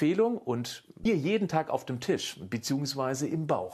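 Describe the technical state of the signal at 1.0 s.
Damaged data in a compressed stream from 1.02 to 1.06 s: corrupted bytes make the decoder misread frames and lose sync, producing a brief chirp, squawk, click or short hole.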